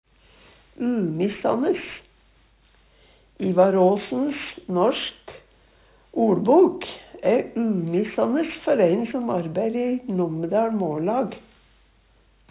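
Aliasing runs through the whole recording. Content above 4 kHz was not filtered out before the rate was reduced, which fits a drop to 8 kHz, so it folds back below 4 kHz as unrelated, gritty tones sitting well under the main sound.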